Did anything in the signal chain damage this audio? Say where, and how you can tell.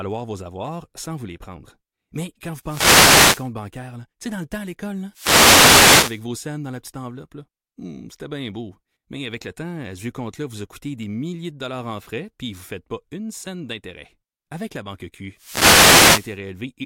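Yes, the wireless microphone's analogue radio link faded three times, giving wireless microphone noise hits: static swishes at 2.61–3.51 s after "quand vous", 5.11–6.23 s after "le temps à l'école", and 15.34–16.40 s. Cancelling reflections weakened the signal, so receiver noise rose.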